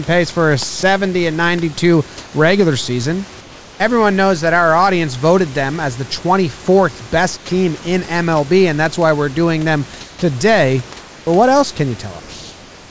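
Sound dropped by the voice detector at 0.80 to 0.83 s in this speech recording: a 30 ms stretch gives way to steady noise, likely because the sender's detector mistook it for background and stopped transmitting. Comfort noise in place of the background appears at 2.18 to 2.33 s, 3.41 to 3.80 s (between "regular season" and "knows that our audience"), 7.37 to 7.49 s, 10.01 to 11.27 s (between "why we're doing them" and "what else can") and 12.20 to 12.90 s. Each time, the room noise, about 23 to 25 dB below the speech, is swapped for a smooth synthetic hiss, likely from discontinuous transmission during pauses. That hiss shifts the level by about +2, -3, -4 and -2 dB. Onset clipped by the voice detector at 7.46 to 7.49 s and 10.19 to 10.22 s: the detector likely reacted late, so the first 30 ms of each restart is lost and the sound begins abruptly. Nothing is heard above 8 kHz, which fits the G.722 call codec.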